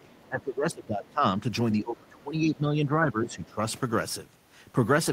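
An echo canceller likely caught in double talk, unable to tell the talker from the loudspeaker echo, turns the speech down from 0.00 to 1.24 s, causing speech suppressed in double talk. For most of that second the voice sinks, by around 20 dB at its deepest. From 0.14 to 0.20 s, the canceller likely leaves some of the loudspeaker signal in the microphone path, so the other side's voice leaks through as a brief, faint scrap far beneath the talker, roughly 35 dB down. From 1.81 to 3.58 s the same likely double-talk confusion suppresses the speech again for about a second and a half, dipping it by around 15 dB at worst.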